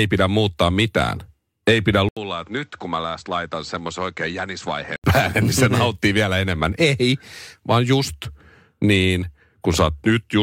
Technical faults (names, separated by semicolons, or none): input switched to a poorer device